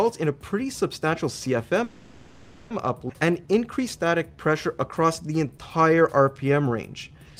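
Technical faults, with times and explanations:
1.83 to 2.72 s, call audio freeze: the sound stalls and the last moment is stretched into a fading buzz or hiss for about 0.87 s, then resumes where it stopped with nothing lost. Packets were held up in transit, likely leaving the jitter buffer empty.
3.08 s, skip ahead: playback jumps forward with almost no gap, and roughly half a second of audio is gone. The two sides of the missing stretch are joined nearly directly, as happens when audio is dropped in transit or discarded by an overflowing jitter buffer.
3.26 to 7.36 s, jitter buffer slow-down: the audio runs at about 91% speed with unchanged pitch, sounds drawn out, adding about 0.38 s. The receiver repeated short pitch periods and pause fragments to rebuild its buffer reserve.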